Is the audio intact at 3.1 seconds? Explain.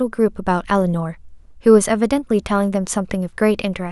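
Yes, the speech at 3.1 seconds is intact, with no fault heard at that moment.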